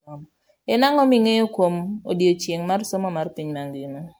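Throughout, the speech sounds swirly, hollow and smeared, with blurred attacks, worse than a single MP3 pass near 128 kbit/s: likely generation loss from about seven re-encodes.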